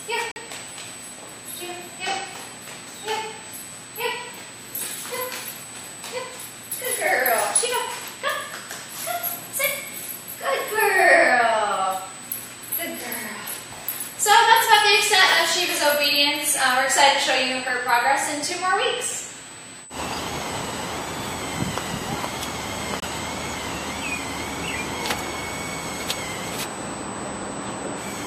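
Throughout the clip a USB whine sits at a fixed 8 kHz, roughly 15 dB below the programme. It is the bus's 125-microsecond microframe rate leaking in through power or ground, which sets it apart from mains hum, which would sit at 50 or 60 Hz and their low harmonics.

From 0.31 to 0.38 s, and again from 23.00 to 23.06 s, a corrupt frame was muted. The sound cuts abruptly to silence for a span that fits two rejected compressed frames. Unlike a buffer dropout, nothing after each hole arrives late, so timing stays intact.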